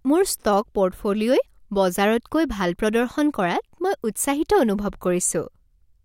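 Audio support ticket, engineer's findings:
Clock slip clicks, 0.28–5.90 s: faint regular ticks roughly every half second, about ten in all, each a single-sample jump. Likely cause: two unsynchronised device clocks, around 40 ppm apart, forcing a dropped or repeated sample as the drift accumulates.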